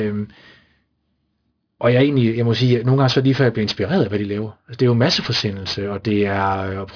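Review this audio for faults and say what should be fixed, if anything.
Aliasing runs through the whole speech clip: sibilants turn gritty and metallic, and the spectrum presses hard against 5.5 kHz. This fits a drop from 48 kHz to 11 kHz without filtering, folding higher content back as unrelated tones about 15 dB below the speech. To prevent it, low-pass the audio below 5.5 kHz before resampling, or use a band-limited resampler.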